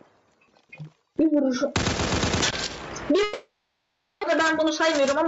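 Right from the start there's gain pumping. The gain ducks under every loud moment, swinging somewhere around 20 dB. That's likely a mic gain set way too high with a fast limiter clamping down on each peak, so everything sounds squashed.

At 3.23 s you hit a long network dropout that runs to 4.25 s. The last bit of sound gets stretched into a fading buzzy or hissy fill for about a second, and roughly 840 ms of real audio is likely just gone when it picks back up, with the delay shifting by roughly 150 ms.

From 4.40 s to 5.26 s there's a jitter buffer speed-up. After that gap the buffer was holding too much, so it kept snipping out tiny pitch-period slices, about 40 ms in all. Playback runs at 104% with the pitch unchanged, just short of where it would start to sound hurried. All of this sits on the call path's 8 kHz bandwidth.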